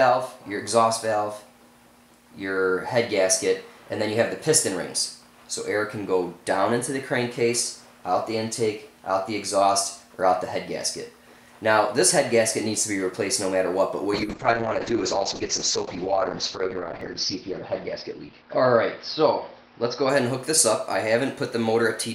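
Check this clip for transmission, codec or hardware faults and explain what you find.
There's one fault here, a call bitrate drop running from 14.14 s to 20.91 s. The bandwidth estimate collapsed, so the encoder got starved of bits, with the worst stretch lasting about 3.2 s. Coarse coding makes the audio rough and watery, and the top end shrinks from 20 kHz to about 6 kHz, so it turns muffled. That fits the rate falling from around 96 kbps to roughly 7 kbps before recovering.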